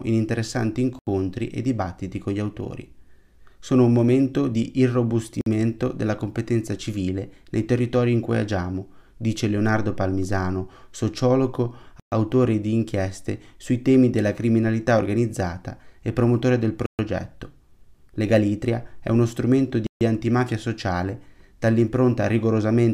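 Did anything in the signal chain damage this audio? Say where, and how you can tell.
Yes, there are five brief dropouts to dead silence in the playback stage: at 0.99 s (80 ms), 5.41 s (53 ms), 12.00 s (123 ms), 16.86 s (128 ms) and 19.87 s (143 ms). Each time, the sound just stops cold and then carries on from where it left off. That pattern is most likely a Bluetooth stall: radio interference delays packets, the headphones' buffer runs empty, and playback waits for the retransmissions to arrive.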